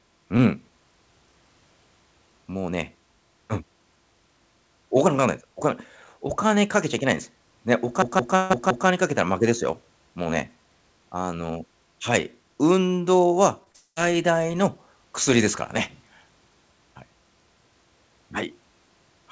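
From 8.02 to 8.87 s a short stretch of speech stutters like a machine gun, one 0.17 s fragment repeating five times at about 5.9 per second. That is a system hang loop: the system froze while the sound hardware kept replaying one ring buffer, a length that fits an 8192-sample buffer.

Inside that stutter, from 8.36 to 8.52 s, the last sound is held and fades, and then the audio jumps ahead. This is a burst of packet loss. About 140 ms never arrived in time, so the receiver stretched the last sound over the gap, and that stretch of speech is missing.

At 13.64 and again at 13.72 s there are brief smears, each lasting about 20 ms. Both are short concealed packet loss: tiny holes the decoder patched by continuing the preceding sound before blending back into the real signal.

Right after, from 13.76 to 13.98 s, a continued sound fades out and leaves about 50 ms of silence before the audio returns further on. 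This is likely a long network dropout. About 200 ms went missing in transit, and concealment could only bridge part of it.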